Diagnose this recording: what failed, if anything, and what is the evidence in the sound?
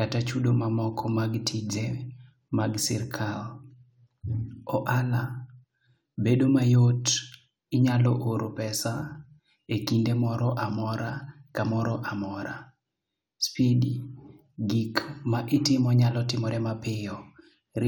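Nothing in the signal chain has failed, and the speech signal stays continuous and stable at every stage from capture to playback.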